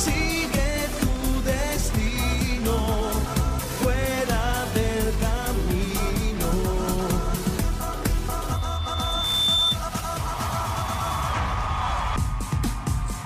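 At 8.53 s a thin, piercing tone around 3.6 kHz appears and swells over about a second into a squeal that ends up a few decibels louder than the rest of the sound, then cuts off at 9.79 s. This is loudspeaker feedback squeal: the microphone picked up the loudspeaker it was driving, and at 3.6 kHz the loop gain rose above one, so that frequency fed on itself and grew.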